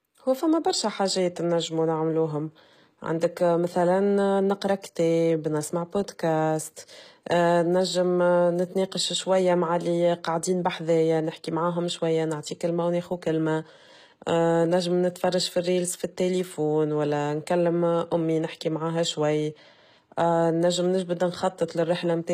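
From start to end the speech carries plainly audible HE-AAC compression damage, likely from a low-bitrate stream around 20 kbps. The treble is synthesised by copying lower bands upward, so s sounds turn gritty and lispy rather than simply dull. There is nothing above about 14.9 kHz.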